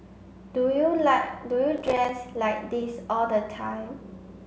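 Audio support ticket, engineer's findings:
Processor overload crackle, 1.78–2.09 s in the speech. Symptom: gritty crackle over roughly 0.3 s. Probable component: audio processing thread, CPU starved. Mechanism: repeated buffer deadlines missed, each gap filled with silence. Hard-edged dropouts roughly 5 ms each, consistent with short buffers and around fifteen misses in all. Clears once load drops.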